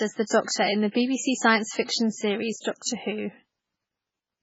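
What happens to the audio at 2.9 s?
Just before the attack near 2.9 s, from 2.82 to 2.86 s, a short hiss of pre-echo rises for about 34 ms. The codec spread its quantisation noise across the whole block, so noise sized for the loud onset leaks into the quiet moment before it. Unlike reverb, it comes before the sound rather than after.

Throughout the speech, nothing remains above 7.6 kHz, and the remaining detail has a watery, swirling texture. This is likely MP3 compression at a very low bitrate, around 16 kbps, with weak frequency lines switching on and off between frames. Those flickering lines separate it from a plain low-pass filter.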